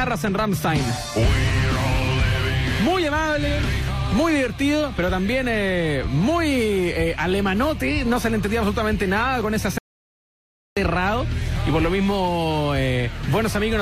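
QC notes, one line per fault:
9.78–10.77 s, audio dropout to silence. The sound cuts off abruptly and returns after about 0.98 s. The gap is silent, with no room tone. The input was likely lost while recording continued, writing silence. Anything in that stretch is gone.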